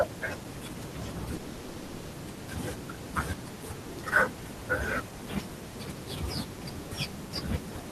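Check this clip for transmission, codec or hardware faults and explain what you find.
One transmission fault is present, in the speech between 1.35 and 2.15 s. It is a long network dropout. For about 0.8 s, the receiver has nothing new to play. It keeps repeating and stretching the last sound, which turns into a fading buzzy hiss. That filler covers the whole gap, with no silent stretch. The cause is likely audio packets lost or delayed in transit. The speech then resumes with roughly 780 ms missing.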